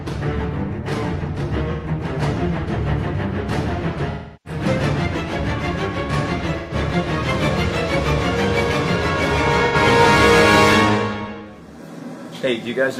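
Smeared, noisy patches interrupt the sound at 1.72–1.88 s, 4.10–4.60 s, 6.58–6.74 s and 9.65–9.76 s. The longest one dips and recovers. This is AAC frame loss with concealment: the decoder rebuilt the gaps of about 128, 341, 128 and 85 ms from the last good spectrum.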